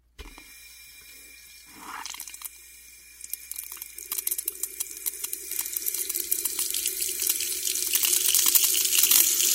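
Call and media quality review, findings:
No call or media quality faults found in this audio.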